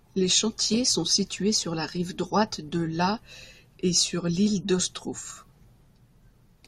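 Speech recording with no audible technical faults anywhere in the clip.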